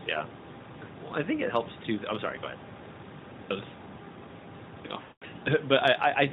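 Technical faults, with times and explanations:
0.62 s, 3.29 s and 4.65 s: clipped start after a pause. The output device sleeps through each preceding pause and wakes late, swallowing about 0.2 s, so sound bursts in abruptly, first before "well i think it".
5.02 to 5.24 s: lost AMR speech frames. Radio errors spoiled a run of frames fitting about ten 20 ms frames, and the decoder repeated the last pitch and vocal-tract settings with falling gain, so the sound smears and fades to silence.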